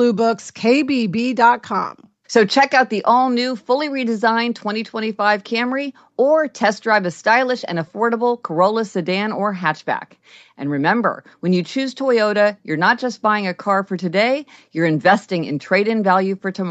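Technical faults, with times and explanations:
No technical faults are audible in this speech recording.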